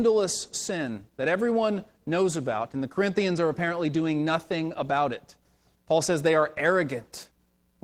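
The speech throughout carries plainly audible Opus voice compression. The lower band sounds hoarse and faintly robotic, as the linear-prediction coder renders the excitation coarsely, while content above 8 kHz is kept. This fits hybrid mode at a low rate, around 16 kbps. A spectrogram would show smeared, patchy energy above 8 kHz, quantised in blocks that follow a 20 ms frame grid, over a blurred harmonic structure below.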